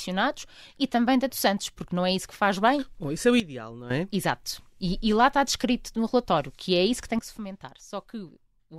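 At 3.40 s the level drops by about 12 dB and comes back at 3.90 s; at 7.19 s it drops by about 11 dB and stays down to the end. Each change is instant, with background noise falling together with the speech, unlike a fade or compressor ducking. This sudden gain jump is likely an unramped digital gain change.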